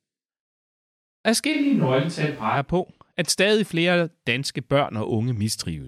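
A speech clip in which, from 1.54 s to 2.55 s, the sound abruptly turns roomy and hollow with thinner bass and audible background noise, then snaps back. The level barely changes. The cause is likely a switch to a distant microphone. Unlike a simple low-cut filter or added reverb, room reflections and noise arrive together.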